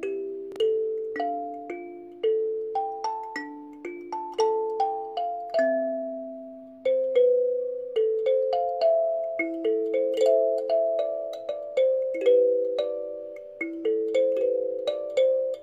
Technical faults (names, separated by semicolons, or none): chunks out of order